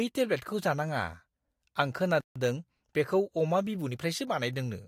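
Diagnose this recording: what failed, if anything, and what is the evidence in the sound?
Playback's the stage here: at 2.21 s the speech just cuts to silence for 151 ms, then picks up at 2.36 s. That's a playback stall, likely the player starving for data or its thread getting blocked, so output sat silent until it recovered.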